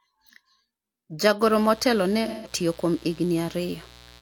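At 1.39 s a mains buzz sets in and runs to the end of the clip. Sharp switching spikes, likely from a dimmer, rectifier or unshielded lead, entered the signal at twice each 60 Hz cycle, so the sound is a steady, raspy buzz sitting roughly 25 dB below the speech. On a spectrogram it appears as a comb of evenly spaced horizontal lines at multiples of 60 Hz, climbing into the several-kilohertz range, with a regular spiky ripple along the waveform.

From 2.27 s to 2.51 s, AAC frame loss with concealment interrupts the speech. The decoder lost a short run of frames, about 0.17 s of audio, consistent with a few AAC frames, and filled the gap by reusing the last good spectrum with altered phase and smoothed energy. It sounds like a brief smeared, noisy, phasey patch in place of clear speech. A spectrogram shows a blurred block where formant detail vanishes and energy looks flattened.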